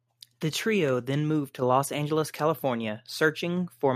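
Microphone volume stepped up at 1.62 s: the call software raised the input level in one step, so the speech and background jump together by about 7 dB.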